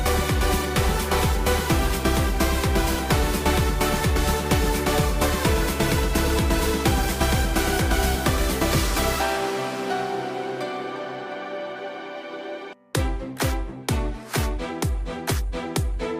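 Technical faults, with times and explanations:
Nothing stood out as a technical problem on listening.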